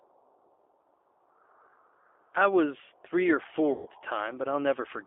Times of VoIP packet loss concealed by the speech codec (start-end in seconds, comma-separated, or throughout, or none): 3.72-3.89